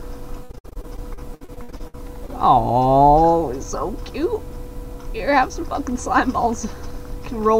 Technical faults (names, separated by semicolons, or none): repeated packet loss (robotic sound)